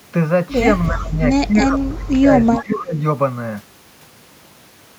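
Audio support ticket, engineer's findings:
Speech suppressed in double talk: talker level dips, up to about 25 dB, at 0.91–1.21 s, 1.47–2.29 s, 2.47–2.97 s. Likely echo canceller attenuating both sides during overlapping talk.

Echo leak: delayed copy of the speech, 333 ms late, at 0.97–1.04 s (faint) and 2.53–2.73 s (nearly speech level). Likely residual loudspeaker echo passed by the far-end canceller.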